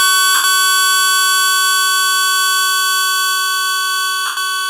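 A short recording of everyday sounds with two spots of lost LE Audio frames, at 0.35 to 0.44 s and again at 4.26 to 4.37 s. The gaps last about 90 and 110 ms, which fits runs of 10 ms LC3 frames dropping out over the Bluetooth link. Rather than going silent, the decoder keeps replaying the last spectrum with scrambled phase, so the sound smears into a hissy wash that fades as the gap continues.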